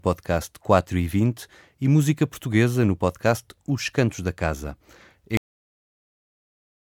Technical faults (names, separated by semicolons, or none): cut-off end